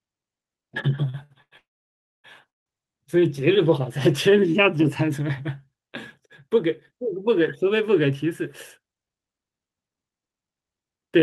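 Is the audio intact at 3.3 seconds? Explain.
No. A jitter buffer slow-down runs from 2.85 to 3.41 s: the receiver repeats single pitch periods to build a reserve, adding 42 ms and slowing the speech to 94% speed at unchanged pitch.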